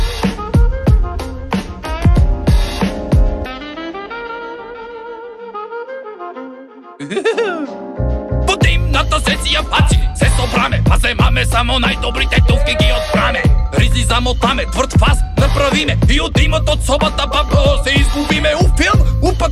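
No technical faults can be heard anywhere in this recording.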